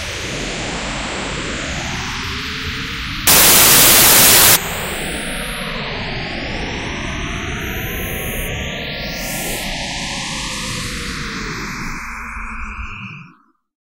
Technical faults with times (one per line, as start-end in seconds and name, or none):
3.27-4.56 samples built from the wrong bytes